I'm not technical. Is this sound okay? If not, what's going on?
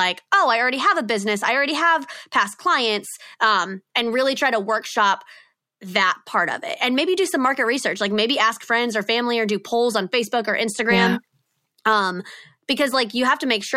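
Yes, this sound is okay, and nothing is going on with it that needs fixing.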